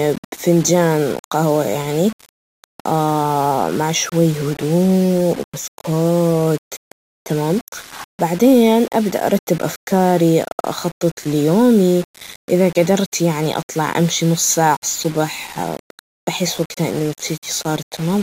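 Throughout this speech clip there is grainy distortion that tracks the voice, sitting around 20 dB below it, likely low bit depth without dither, with 5-bit rounding. Unlike steady hiss, the grit follows the signal and is roughest on quiet sounds.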